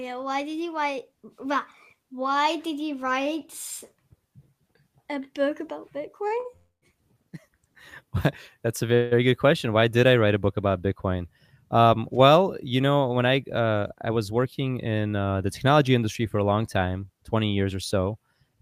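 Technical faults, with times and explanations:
6.27 to 6.32 s and 6.40 to 6.46 s, short stall from a late packet: twice in quick succession a packet arrived after its playout time, so the receiver stretched the sound it already had, by 29 ms and then 42 ms, and resumed from the same point with nothing lost. Each sounds like a held, faintly buzzy moment. On a spectrogram the harmonics run flat and unchanged for that span; the waveform shows a repeated cycle with a small dip in level.
6.56 to 6.84 s and 8.95 to 9.13 s, call audio freeze: the sound halts and then continues where it left off, likely because packets were held up in transit and the jitter buffer drained. In the first freeze the receiver fills 254 ms, with the last sound continued as a fading buzz that then drops to about 150 ms of silence. In the second freeze 166 ms is filled with a decaying continuation and no silent stretch. 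A spectrogram shows smeared, fading bands, plus a blank column in the first freeze. In the first freeze the waveform tapers to flat before the speech resumes.
13.60 to 15.06 s, jitter buffer speed-up: the buffer held more audio than its target, so the receiver trimmed it back by cutting out short pitch-period-sized pieces over and over. Playback runs at about 110% speed, with roughly 150 ms removed in total, while the pitch stays the same. The speech sounds hurried. On a spectrogram the syllables look compressed in time but the harmonic spacing is unchanged. The waveform shows periods spliced together more tightly.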